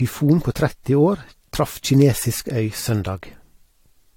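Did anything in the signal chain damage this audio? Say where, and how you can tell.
Yes, at the codec stage: the speech is swirly and hollow throughout, with smeared attacks and nothing above 16.6 kHz, likely generation loss from repeated AAC re-encoding.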